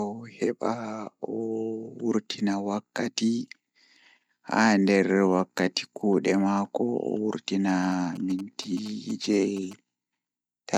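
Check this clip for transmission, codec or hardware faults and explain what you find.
One fault is present: GSM signalling bursts. From 7.68 to 9.73 s, a nearby 2G phone's radio bursts are rectified by the audio circuit. They give a galloping dit-dit-dit of short 217 Hz buzzes, well below the speech.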